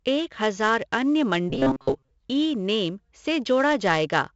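Throughout the speech, 4-bit ADPCM compression leaves a gritty hiss riding on every loud syllable, with roughness on sharp onsets and nothing above 7.8 kHz. The 64 kbps rate fits a 16 kHz sample rate. Unlike the swirly artefacts of perceptual codecs, this noise rises and falls with the signal level.

From 1.50 to 2.11 s, just after "हजार अन्य", the voice turns into a rigid metallic buzz at 134 Hz, the robotic sound from repeated short buffers. The likely cause is the same roughly 7.5 ms of audio being replayed in place of most of the real material. The buzz holds a fixed pitch regardless of intonation, which sets it apart from pitch-shifting.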